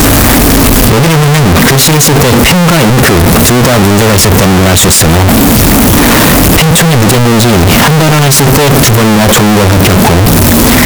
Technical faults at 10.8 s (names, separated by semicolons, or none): signed and unsigned mixed up